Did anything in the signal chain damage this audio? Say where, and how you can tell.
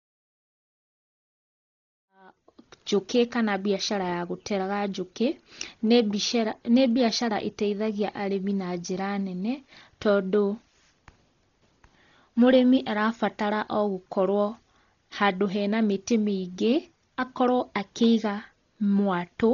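Yes. Dolby Digital compression damaged the whole clip, at the codec stage, and the sound points there only as the likely cause. The speech has nothing above 6.9 kHz, so it sounds dull, and rough, fluttering noise clings to voiced tones. That fits heavy AC-3 coding at a very low bitrate, around 32 kbps: the encoder narrowed the band and starved many frequency lines of bits, leaving the decoder to fill them with noise. The fade-in from about 2 s to 3.1 s is a normal edit.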